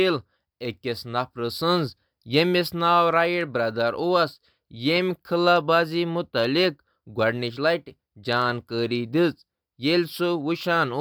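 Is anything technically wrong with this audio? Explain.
No, nothing technically wrong can be heard here.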